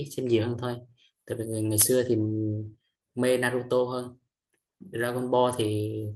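At 0.35 to 0.37 s, a lost packet rebuilt from error correction: a 20 ms stretch, consistent with one lost packet, was replaced by the low-bitrate copy carried in the next packet. Unlike a dropout or extrapolated concealment, there is no gap or smeared tail, just a brief rougher, noisier patch.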